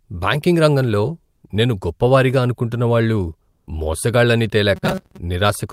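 From 3.51 to 3.67 s, just after "గొప్ప వారిగా అనుకుంటున్న వాళ్ళు", comfort noise replaces the background. The quiet background sound, about 48 dB below the loudest speech, becomes a flat, featureless hiss about 15 dB lower for 160 ms, likely because discontinuous transmission stopped sending during the pause.

From 4.76 to 5.18 s the speech takes on a robotic sound from repeated short buffers, a rigid metallic buzz at 188 Hz. That pitch fits a segment of about 5.3 ms being replayed, with roughly half the audio repeated rather than new, likely because packets arrived too late.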